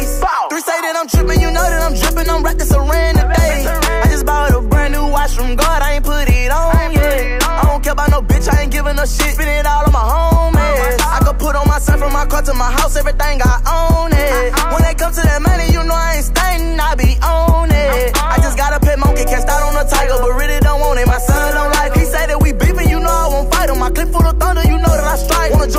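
No technical faults can be heard anywhere in the clip. Nothing in it needs repair.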